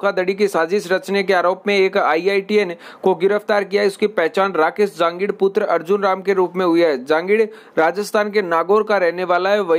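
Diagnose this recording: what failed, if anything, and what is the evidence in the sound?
Nothing failed here that I can hear: the sound holds steady all the way through, with no break, glitch or disturbance at any stage of the chain to point a finger at.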